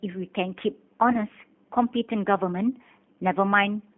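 From the start, the speech carries G.729 codec damage, consistent with the G.729A variant at 8 kbit/s. The codec models each short frame with a vocal tract filter and a pitch predictor, then spends only a few pulses on the excitation. That thin excitation is plainly audible. The voice sounds rough and slightly synthetic. The band is also narrow, roughly 150 Hz to 3.4 kHz. Highs and deep lows are gone throughout.

At 1.12 s, a gap appears that the decoder covers with VoIP packet loss concealment. About 20 ms of audio is missing, which fits a single lost packet. The decoder repeats its last pitch and filter with falling gain, so the sound smears and fades. Each frame depends on the one before, so the voice stays weak or distorted until about 1.19 s.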